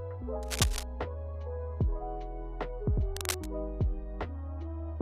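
Cable scratch noise at 0.42–0.84 s, about as loud as the sound, and 3.16–3.47 s, about 5 dB quieter: ragged broadband smears and spiky waveform bursts, likely from a worn, moving connector.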